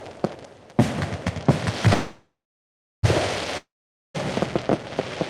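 At 1.93 s a call audio freeze begins. The last sound is stretched into a fading buzz that falls to silence for about 0.68 s, and playback resumes at 3.05 s exactly where it stopped. This is likely a stalled jitter buffer, and it adds about 1.1 s of delay without losing anything.

From 3.57 s to 4.16 s a long network dropout occurs. Sound again decays into a brief buzz, then about 0.47 s of silence. When audio returns, roughly 0.58 s of material has been skipped, likely because packets never arrived and were never played.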